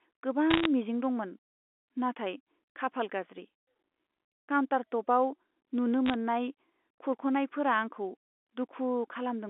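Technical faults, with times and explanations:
0.50 to 0.66 s and 6.06 to 6.14 s, bit errors on a digital phone line: short bursts of sharp ticks and crackle where flipped bits, at roughly 0.7 and 0.5 percent, corrupt single samples on the mu-law telephone channel. The speech underneath carries on unbroken, with no gaps or muting as packet loss would leave.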